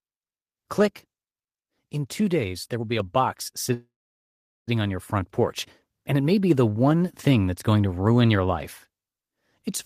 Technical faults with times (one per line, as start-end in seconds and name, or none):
3.00 microphone volume stepped up
3.73-4.69 call audio freeze